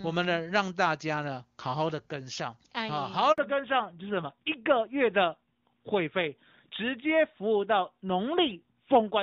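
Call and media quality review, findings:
Handover gap, 3.32 to 3.38 s: 60 ms of clean silence after a quick fade. Network switch, no frames delivered. No repeated or smeared audio, so not packet loss concealment.

Fallback to narrowband, from 3.38 s to end: nothing above 4 kHz, duller and rougher. Codec renegotiated from HD Voice to legacy narrowband, likely top-rate AMR-NB. Abrupt and permanent at the handover, unlike gradual bitrate adaptation.

Before the switch, the AMR-WB path sounds clear, consistent with its highest rate.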